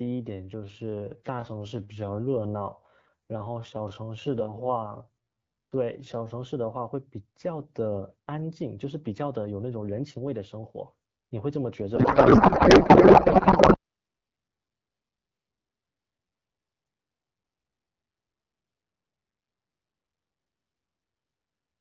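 A speech recording with two faults. From 0.0 to 6.34 s it plays at about 0.69 times normal pace with unchanged pitch, dragging, likely a time-stretched section rather than a slowed playback clock, which would drop the pitch too. From 11.96 to 13.77 s the speech becomes garbled warbling noise that barely follows it, a codec payload misread in which octet-aligned AMR frames were read as bandwidth-efficient. Unlike packet loss, there are no gaps or concealment fades.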